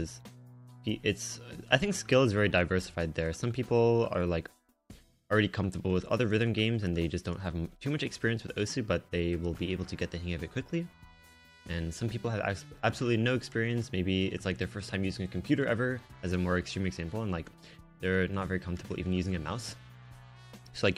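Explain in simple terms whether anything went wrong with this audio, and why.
Nothing went wrong here; there's no glitch, dropout or distortion anywhere in this recording, so there's nothing to point to.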